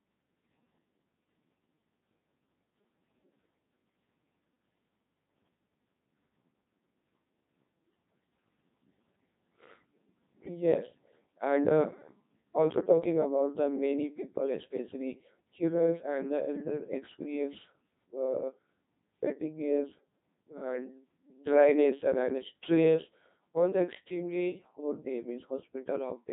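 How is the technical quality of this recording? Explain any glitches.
Pretty rough. The whole clip has gone through a Codec 2 vocoder, and the damage is heavy from start to finish. Codec 2 doesn't keep the waveform. It sends only pitch, voicing, loudness and a rough spectral shape, then rebuilds the speech from sine waves. The result here is robotic and buzzy, with a synthetic quality and nothing above 3.8 kHz. That level of degradation fits a very low bitrate, around 2.4 kbit/s.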